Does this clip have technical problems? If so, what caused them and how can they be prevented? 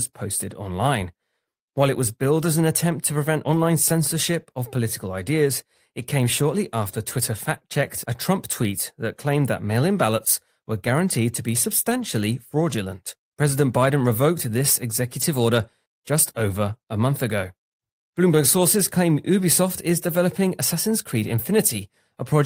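Yes. Packets were lost in transit, and the decoder filled each gap with the low-bitrate copy carried in the following packet. This is a lost packet rebuilt from error correction. There is no dropout, but each patched stretch sounds briefly rougher and noisier. It happens at 2.39–2.45 s (after "it was", 40 ms), 3.45–3.59 s (after "an attempt to prevent", 80 ms), 7.53–7.59 s, 11.89–12.03 s (80 ms), 15.17–15.23 s (after "revoked this"), 19.39–19.41 s and 21.27–21.33 s. Fixing network packet loss, for example with a wired connection or less congestion, would prevent it.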